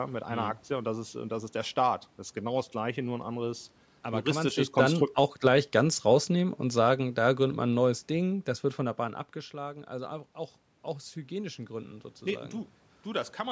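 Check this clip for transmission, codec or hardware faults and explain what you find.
One fault is present: automatic gain falling. From 4.27 to 8.44 s, after "nur ein anderes aber", the gain control judges the input too loud or its background noise too strong and lowers its gain by about 6 dB. Speech and room noise sink together until "das wird von der".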